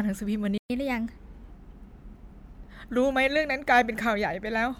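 It's a speech clip, and early on the sound just cuts out: a playback stall from 0.58 to 0.70 s, roughly 120 ms of dead air, likely because the player ran dry of buffered data or its output thread got held up. Right after, from 0.70 to 1.50 s, there's catch-up at higher speed: the backlog is resampled to play 1.15 times faster, so the speech rushes and rises about two semitones in pitch until the lost time is made up and everything settles back to normal.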